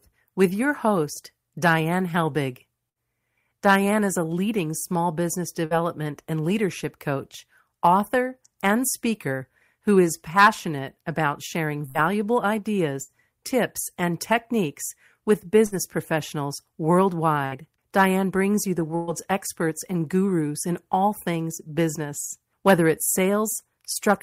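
Seven brief stalls interrupt the speech, at 2.89, 5.65, 11.89, 13.03, 15.66, 17.46 and 18.96 s. In each, the last sound is stretched into a held buzz or fading hiss, and the speech then picks up slightly ahead. This is a burst of packet loss. About 60 ms of audio went missing in each of the first six, and the receiver covered the gap by extending and attenuating the previous sound. The final stall is twice as long, with about 120 ms lost.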